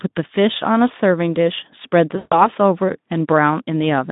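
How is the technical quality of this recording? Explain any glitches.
Narrowband Speex speech with one audible dropout. From 2.15 to 2.48 s, VoIP packet loss concealed by the speech codec: about 160 ms went missing, which fits eight 20 ms frames. The decoder extended the last pitch and filter with falling gain, so the speech smears into a fading buzzy tone or coloured noise and stays weak briefly after packets return.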